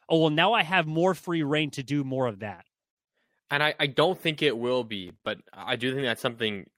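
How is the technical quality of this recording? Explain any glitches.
One glitch stands out. Processor overload crackle, 5.08 to 5.27 s, after "don't think it will" and before "but I": around ten missed buffers of roughly 5 ms each dropped to silence, tearing the sound into gritty crackle.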